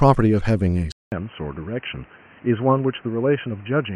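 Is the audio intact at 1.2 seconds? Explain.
No. At 1.2 s you're in the stretch where the input has switched to a poorer device, which runs from 0.92 s to the end of the clip. The likely cause is the system jumping to a different microphone or a headset's call profile. The speech drops out for 200 ms at the switch, then comes back boxy with nothing above 3.1 kHz, a few dB quieter, and with a new noise floor sitting around 30 dB below it.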